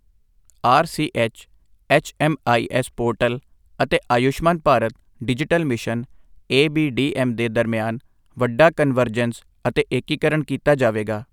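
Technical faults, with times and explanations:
No technical faults detected.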